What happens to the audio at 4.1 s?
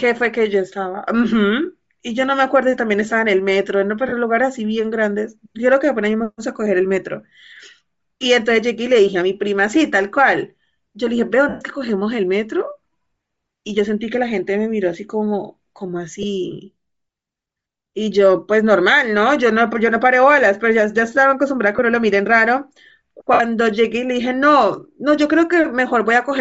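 A short dropout of lost LE Audio frames runs from 4.08 to 4.13 s. About 40 ms of speech goes missing, which fits five lost 7.5 ms frames. The decoder hides the gap by replaying the last good spectrum with random signs. This gap is brief, so it never fades into silence. Instead you hear a noisy, smeared patch where the voice loses its clear pitch, and then the speech snaps back.

Around that moment the speech also carries a breathy, grainy edge, plainly audible. This is likely Bluetooth LC3 compression at a low rate, fitting roughly 32 kbps with 7.5 ms frames. At that rate the codec zeroes much of the upper spectrum and fills the gaps with noise. The result is a hissy, synthetic top end in place of real detail.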